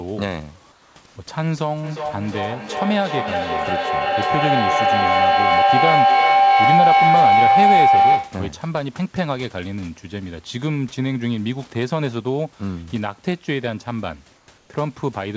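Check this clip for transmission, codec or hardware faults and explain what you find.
Two problems turn up here: a few short patches where the background goes flat, and a long feedback howl early on.

Comfort noise in place of the background shows up at 0.72 to 0.96 s, 1.06 to 1.16 s and 14.36 to 14.48 s. In those pauses the room noise turns smooth and featureless, about 3 dB quieter in the first, about 2 dB quieter in the last. That's likely discontinuous transmission, with the receiver filling the gaps with synthetic noise.

The feedback howl runs from 1.83 to 8.55 s. A tone around 700 Hz builds up, pulsing roughly every 0.4 s and peaking about 8 dB above the speech. It sounds like two devices on the call sharing a room, with the mic-to-speaker loop gaining level on each pass until that frequency takes over.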